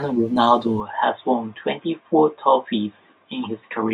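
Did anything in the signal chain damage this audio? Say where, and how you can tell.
Yes: from 0.8 s, nothing above 3.8 kHz and a faint new noise floor appear, likely an input switched to a poorer device rather than codec filtering.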